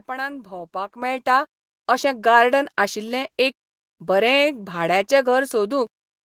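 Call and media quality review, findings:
Microphone volume stepped up at 1.02 s. Speech and background noise floor jump together by about 7 dB in a single step and hold at the new level. Probable component: call client's automatic input gain control acting on the capture device. Mechanism: software judged the mic too quiet and raised the device input volume at once rather than ramping, so the change lands as an audible level discontinuity.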